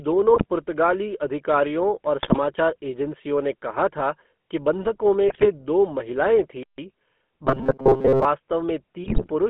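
Speech, heard through the GSM full-rate codec for its whole length. The band runs from about 200 Hz to 3.4 kHz, which fits a 13 kbps full-rate link. The codec damage is plainly audible. The voice has a buzzy, gravelly roughness from the pulse-driven vocal-tract model. GSM bit errors break in at 0.34–0.46 s, 2.22–2.39 s, 5.28–5.47 s and 9.04–9.31 s. Corrupted filter, pitch and gain values distort frames in bursts. The speech squawks, pops and gargles. The last burst is the longest. A playback stall follows at 6.63–6.78 s. The audio drops to silence for about 0.15 s mid-flow, then carries on. The player likely ran out of data or was blocked. Robotic sound from repeated short buffers runs from 7.45 to 8.25 s. Most of that stretch is replaced by a rigid, metallic buzz at 133 Hz. The buzz still loosely tracks the speech. The likely cause is a roughly 7.5 ms chunk looped while fresh audio was late.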